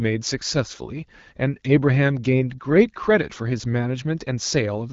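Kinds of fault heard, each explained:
No kinds of fault are heard in this speech clip.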